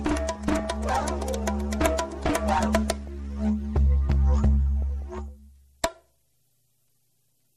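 MP2 compression runs through the whole clip: the sound is dull, with a gurgling, granular texture. This is likely MPEG Layer II coding at a low rate, consistent with about 80 kbps, where too few bits shut off upper sub-bands and leave the remaining bands coarsely quantised.

DAB burbling breaks in at 0.35 to 0.65 s, 2.51 to 3.08 s, 4.82 to 5.28 s and 7.25 to 7.37 s as short blips of noise. Bit errors, a small fraction of a percent, slipped past error correction and corrupted samples, putting the blips into single sub-bands.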